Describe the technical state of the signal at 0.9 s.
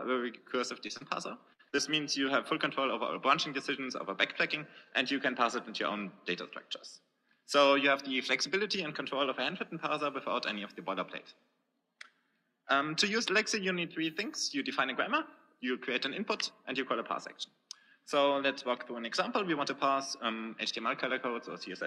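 Short concealed packet loss at 0.87–0.91 s, with a second at 0.97–1.03 s: about 20 ms, then 40 ms, arrived too late, and the receiver extrapolated the preceding sound, leaving a brief smear.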